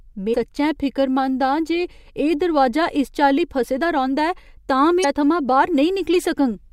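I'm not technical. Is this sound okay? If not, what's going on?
No. Damaged data in a compressed stream causes brief garbled blips at 0.30 to 0.36 s and 5.00 to 5.05 s. The player misreads the corrupted chunks at those points.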